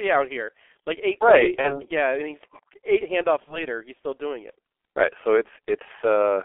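Speech runs through a G.723.1 codec. It sounds muffled, hoarse and heavily damaged. The band sits near 300 Hz to 3.4 kHz, consistent with a roughly 6 kbit/s stream. VoIP packet loss concealed by the speech codec appears at 1.61–1.84 s and 3.45–3.65 s. Each gap fits one lost 30 ms frame, filled by a fading extrapolation that stays distorted afterwards.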